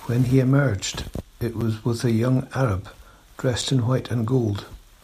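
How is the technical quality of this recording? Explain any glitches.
The speech is broken by two brief, hard-edged dropouts, at 1.61 s and 3.61 s. Each is a gap between chunks: a silence of about 7 ms inserted where 2.0 s blocks of audio join, interrupting the sound without losing any of it.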